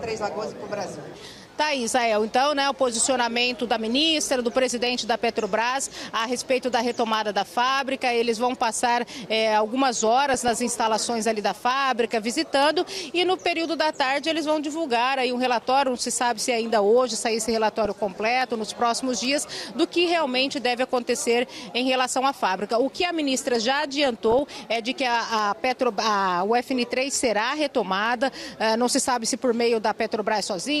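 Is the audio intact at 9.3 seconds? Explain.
Yes, at 9.3 s the audio plays through cleanly, with no dropout, click, distortion or other fault to be heard.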